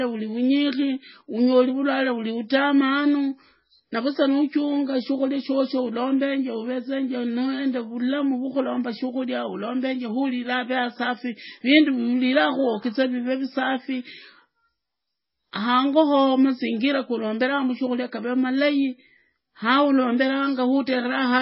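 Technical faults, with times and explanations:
Throughout, MP3 compression: speech has nothing above 5.6 kHz and sounds watery and swirly, unlike a clean low-pass, likely from a very low bitrate near 16 kbps.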